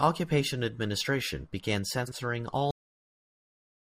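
Just after "administration began", from 2.04 to 2.16 s, frames out of order: two adjacent runs, likely four frames each, play swapped, giving a garbled flutter. At 2.71 s a cut-off end stops the sound mid-syllable, dropping straight to digital silence with no decay because the final buffers never played.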